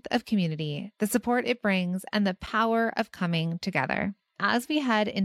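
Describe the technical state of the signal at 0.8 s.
At 0.8 s the speech signal is intact, with no audible fault at that moment.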